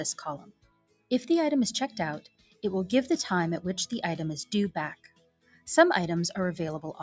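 A noise suppressor applied to music or sounds runs across the whole clip. A speech-oriented suppressor stays engaged and treats steady, sustained material as noise, so its gain keeps moving, with the loss swinging by something like 20 dB. Onsets pass largely intact while held portions and decays are pulled down, which makes the sound pump and thin out rather than sit at a stable level. The band stops at about 8 kHz, as expected after call microphone processing.

Three stretches show sound cut by the noise suppressor. From 0.38 to 1.11 s the level sinks by about 21 dB. From 2.21 to 2.64 s it drops by about 20 dB. From 4.95 to 5.67 s it falls by about 21 dB again. In each case the suppressor decides the sustained content is noise and clamps it, so the sound collapses and its tail is cut short before the gain recovers.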